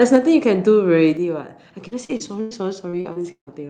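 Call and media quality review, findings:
Microphone overload, 0.01 to 0.16 s. Input gain likely set too high, so peaks drive the converter past full scale by about 3 dB and around 2 percent of samples are flattened. Symptom: harsh, crackly edge on the loudest speech at clip start.

Microphone volume stepped down, 0.16 s and 1.17 s. Call software likely cut device input gain in single steps, about 4 dB then about 5 dB, the first straight after the overload. Symptom: abrupt level drops in speech and background together, no fade.

Repeated packet loss (robotic sound), 1.87 to 2.53 s and 2.89 to 3.49 s. Four gaps in each stretch, 220 ms then 280 ms missing, longest 100 ms and 153 ms. Concealment extends the preceding audio to fill each hole, covering 31 percent and 44 percent of the spans. Symptom: choppy, robotic speech with chunks dropped.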